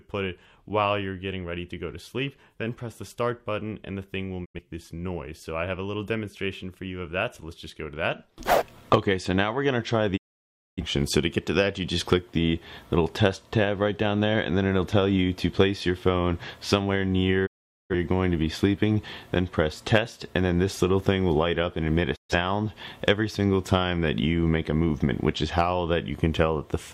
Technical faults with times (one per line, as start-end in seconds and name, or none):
4.44-4.60 digital broadcast dropout
10.16-10.82 digital broadcast dropout
17.45-17.95 digital broadcast dropout
22.15-22.35 digital broadcast dropout